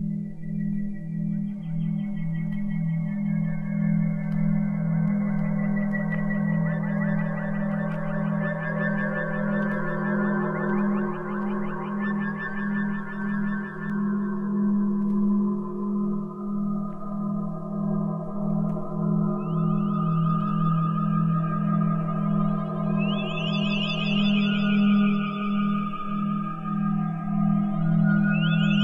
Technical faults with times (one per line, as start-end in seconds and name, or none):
5.08-13.90 doubled audio track